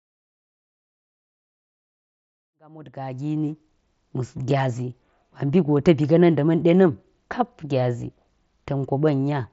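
The speech arrives over a Bluetooth mSBC headset link, with its expected top end near 8 kHz and the light graininess that codec leaves on louder moments, and it rises in a smooth editorial fade-in from around two and a half seconds to full level by about 3.9 s, with no fault present in the signal.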